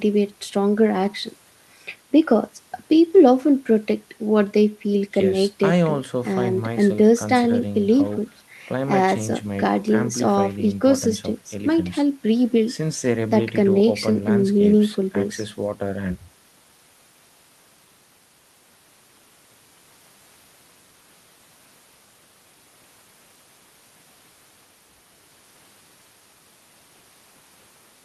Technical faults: none

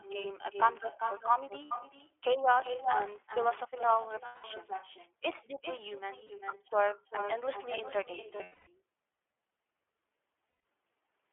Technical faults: echo with no canceller; iLBC codec; lost iLBC frames; buffer tearing

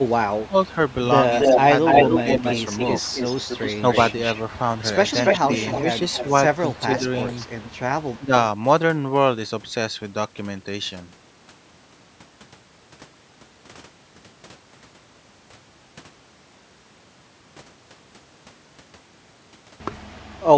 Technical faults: speech suppressed in double talk; echo leak

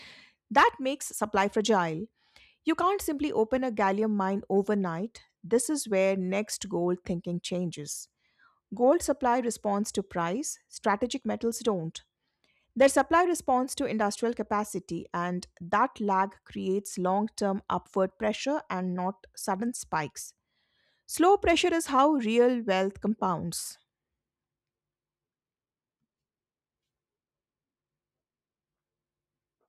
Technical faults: none

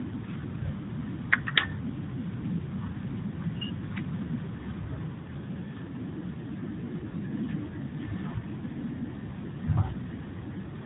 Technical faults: tandem speech coding

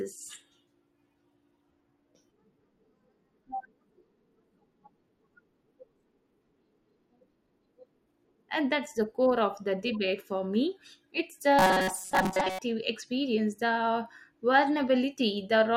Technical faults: robotic sound from repeated short buffers

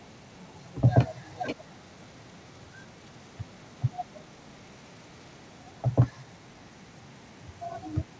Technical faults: echo leak

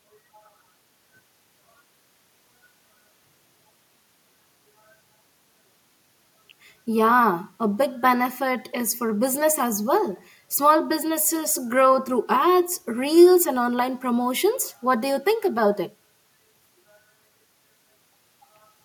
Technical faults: none

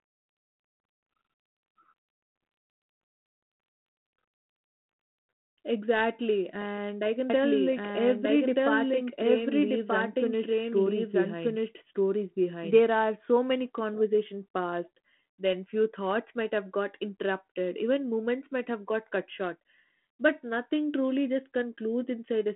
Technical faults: doubled audio track

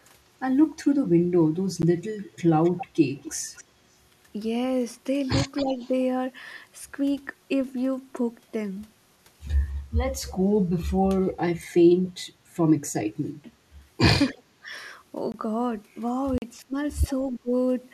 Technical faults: block of digital silence; echo leak; speech suppressed in double talk

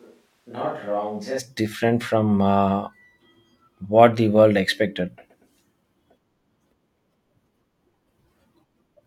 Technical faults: switch to a distant microphone

